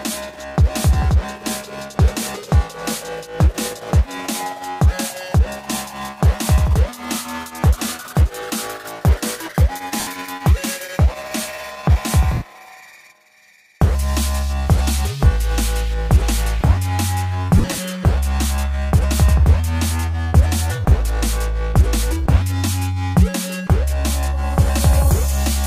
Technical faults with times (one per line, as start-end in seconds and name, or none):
10.00-10.07 lost LE Audio frames
12.34-12.42 lost LE Audio frames
17.58-17.78 lost LE Audio frames